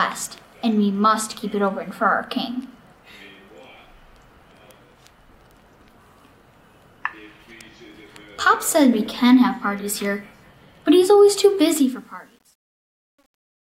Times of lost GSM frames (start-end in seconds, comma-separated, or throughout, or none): none